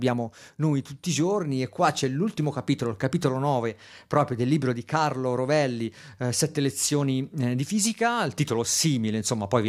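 No technical faults can be heard anywhere in the recording; the signal stays continuous and steady throughout.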